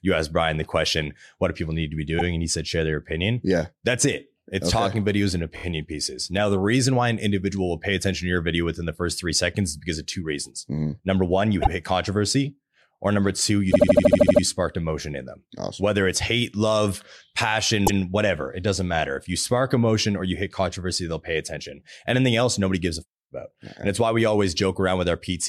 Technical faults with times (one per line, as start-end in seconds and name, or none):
2.18-2.23 repeated frames
5.55-5.63 repeated frames
11.61-11.69 repeated frames
13.70-14.41 repeated frames
17.86-17.99 repeated frames